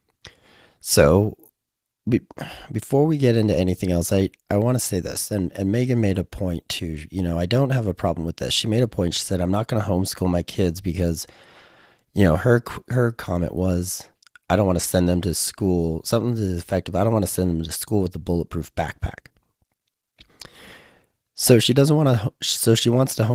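No faults are audible in the speech, and the Opus voice compression, running hybrid and fullband at about 20 kbps in 20 ms frames, leaves only light coding marks.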